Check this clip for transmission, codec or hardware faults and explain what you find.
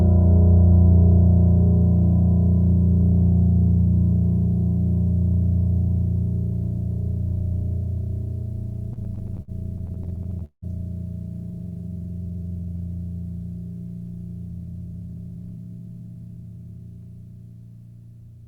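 Two network-related faults show up in this music clip, one right after the other.

Repeated stalls (stutter), 8.93 to 10.65 s: packets arrived late or too slowly, so the jitter buffer kept running dry. Across 18 separate gaps the receiver stretched the last sound to cover the silence, filling about 433 ms in all, roughly a quarter of that stretch, with the longest hold at 178 ms. Nothing drops out, but the music hiccups and drags in short, uneven jerks.

Jitter buffer slow-down, 11.51 to 12.79 s: with its reserve low, the receiver repeated single pitch periods and bits of pauses many times over to rebuild the buffer, adding 237 ms. Playback runs at about 82% speed while the pitch stays put, so the music sounds drawn out and slightly sluggish, with sustained tones stretched.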